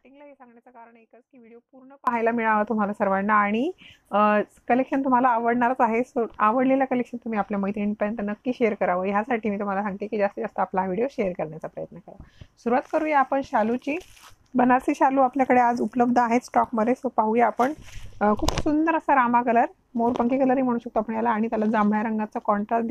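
The signal path likely lost the wanted audio while the chain after the break stayed live, an audio dropout to a faint residue already under way when the clip begins. Until 2.07 s only a faint leak about 25 dB down remains, before the sound abruptly returns.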